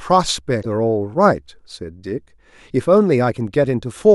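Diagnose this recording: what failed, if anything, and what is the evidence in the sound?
Codec stage: damaged data in a compressed stream makes a brief disturbance from 0.59 to 0.66 s as the decoder misreads corrupted frames and resynchronises on the next header.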